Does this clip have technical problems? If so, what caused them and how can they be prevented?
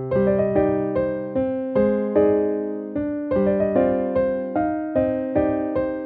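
No, there are no audible technical faults to diagnose here, so there is nothing to trace to a cause or guard against.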